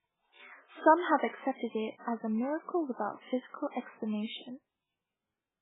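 From start to finish the speech carries heavy damage that points to MP3 compression. Nothing is heard above 3.8 kHz, so the treble is gone and s sounds lose their edge. The sound is watery and swirly throughout. Weak detail flickers in and out as the encoder drops quiet frequency lines from frame to frame. Attacks smear. The thin, starved quality fits a very low bitrate, likely around 8 kbps.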